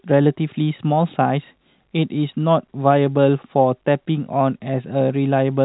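No faults are audible anywhere in this speech.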